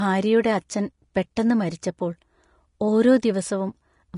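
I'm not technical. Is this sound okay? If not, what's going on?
No. The speech carries audible damage from start to finish, most likely Vorbis compression, a lossy format that shrinks files by discarding detail. Here it was set low enough to cause plainly audible harm. Nothing reaches above about 10.5 kHz, so the top end is simply gone, and the treble that remains is coded so coarsely that fine detail has turned into a hissy, grainy texture. Consonants lose their crispness and the voice sounds roughened and blurred.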